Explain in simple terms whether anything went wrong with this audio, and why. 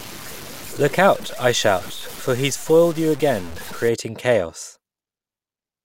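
From the start to about 3.89 s, the speech sounds grainy and rough, as if sprinkled with sand. The grit rises and falls with the speech itself, and the quietest moments break up into a faint sputter or drop out. This is likely low bit depth without dither: the audio was stored with very few levels, which fits about 6 bits, and simply cut off without added noise to smooth the rounding, so the error clings to the speech.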